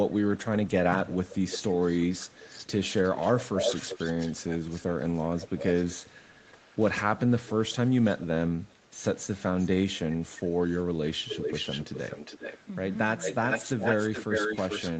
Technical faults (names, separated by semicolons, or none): echo leak